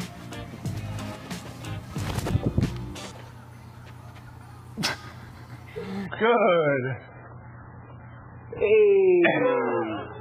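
At 6.06 s the quality falls abruptly and stays low until the end: an adaptive stream at a lower bitrate. The stream has switched to a much cheaper encoding, which fits a step from around 128 kbit/s MP3 down to roughly 8 kbit/s. Nothing survives above about 3.9 kHz, and the remaining sound turns smeared and warbly. Unlike a network dropout, there is no gap or stutter at the switch, only a sudden, sustained change in quality.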